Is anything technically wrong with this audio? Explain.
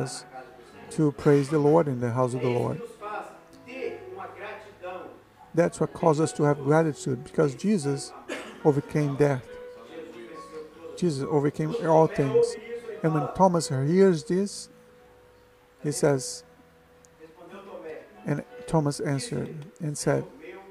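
No, nothing is technically wrong with this audio.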